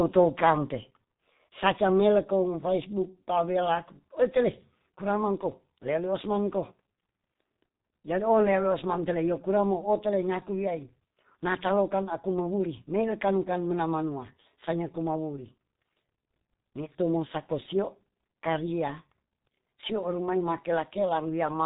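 Speech, run end to end through the G.723.1 codec, and it shows heavily the whole way. Nothing comes through above about 3.8 kHz, so the top is simply gone and everything sounds muffled. The codec models the voice in long 30 ms frames and updates that model slowly, which smears the consonants and leaves a hoarse edge on the voice. That all fits a rate of roughly 6.3 kbit/s.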